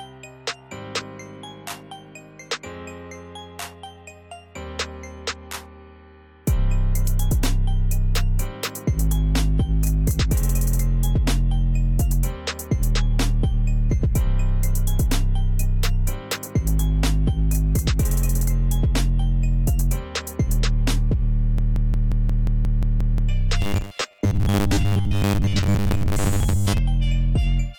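From 21.58 to 23.29 s the audio falls into a broken-record loop: a fragment of about 0.18 s (177.6 ms) plays ten times back to back with no variation, and whatever should have played during those 1.7 s never appears. The exact repetition points to a likely stall in the player, encoder or stream, with the last held fragment being resent until data resumed. A second fault follows from 23.62 to 26.78 s, robotic sound from repeated short buffers. Across most of this stretch the audio turns into a rigid, metallic buzz pitched at 100 Hz, which corresponds to a 10 ms segment being repeated over and over, while the underlying sound's rough contour still shows through. The likely cause is audio arriving too seldom, so the software fills each gap by looping the last 10 ms and skips the real material that was missed.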